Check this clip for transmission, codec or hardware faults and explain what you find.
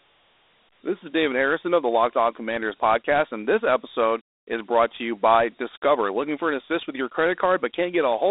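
One codec fault runs through the whole clip. Throughout, Dialogic VOX ADPCM damage is plainly audible. The coder stores each sample as a coarse 4-bit step, which fits 32 kbps. Gritty hiss trails the speech. The band sits at 300 Hz to 3.7 kHz, with nothing above 3.8 kHz.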